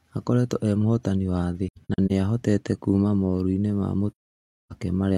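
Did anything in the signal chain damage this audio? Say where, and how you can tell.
Yes: AAC frame loss with muting at the codec decoder, 1.68–2.12 s and 4.11–4.72 s. The zeroed frames show as blank spectrogram columns with soft, faded edges.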